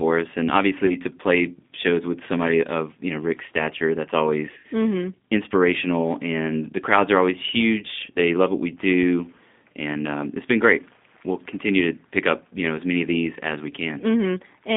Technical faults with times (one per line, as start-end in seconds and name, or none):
0.00-14.77 G.729 codec
0.86-0.96 VoIP packet loss concealed by the speech codec
4.58-4.64 VoIP packet loss concealed by the speech codec